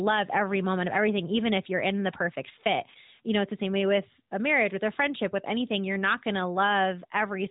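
The speech carries no technical fault, and it has the band-limited sound of the AMR narrowband mobile codec, with nothing above about 3.8 kHz and only light coding texture, which fits its highest 12.2 kbps mode.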